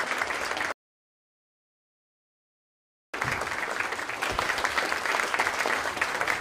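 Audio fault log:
0.72–3.14 s, rebuffering stall: the player exhausted the audio it had already downloaded and had to stop and wait for more data before it could continue. Playback drops to silence for about 2.4 s, then picks up at exactly the point where it halted, with nothing skipped. Because no audio is discarded, the gap does not skip any content. It simply adds about 2.4 s of dead air to the running time.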